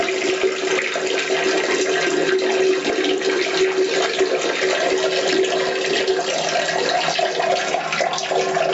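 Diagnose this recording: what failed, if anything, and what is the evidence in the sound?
The stage is gain control, before encoding. The gain swings by roughly 10 dB. Loud and soft parts sit close in level. An over-driven input feeding a fast limiter is the likely cause.

The stage is the codec. Throughout, the upper spectrum sounds hollowed and refilled with grainy noise, giving a breathy edge. This is likely Bluetooth LC3 compression, and the damage fits about 48 kbps with 10 ms frames. Nothing sits above 8 kHz, consistent with the call's band limit.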